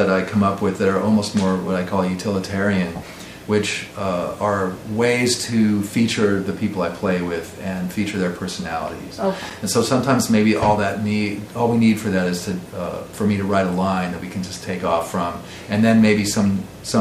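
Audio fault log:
9.47–9.51 s, loose connector crackle: a brief irregular scratch as a worn contact briefly breaks and remakes, chopping the signal for about 40 ms.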